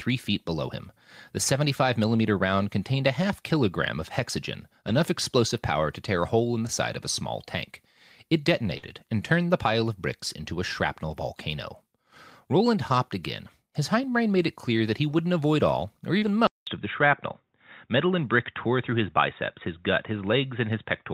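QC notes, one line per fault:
4.87–4.93 s, 8.82–8.92 s, 15.10–15.12 s, 16.22–16.28 s: lost packet rebuilt from error correction. There are no gaps. Each lost stretch was played from a low-bitrate copy carried in the next packet. Those 20 to 60 ms patches sound rougher and noisier than the audio around them.
8.77–8.84 s: burst of packet loss, just before "and turned the pile". The receiver held the last sound for about 48 ms and faded it. This gives a brief held buzz or hiss. Then about 40 ms of real audio is skipped, and speech resumes further on.
16.18–16.24 s: short concealed packet loss, right after "avoid all or". About 40 ms never arrived in time. The decoder extended the previous sound for roughly 33 ms and blended back in. This leaves a short smear or wobble.
16.47 s to the end: input switched to a poorer device. A 200 ms silence marks the change. After it, nothing is heard above 3.8 kHz, so the speech turns dull and boxy. 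The new background noise sits about 55 dB below the speech, and the level stays roughly the same. This is likely a switch to another microphone or headset.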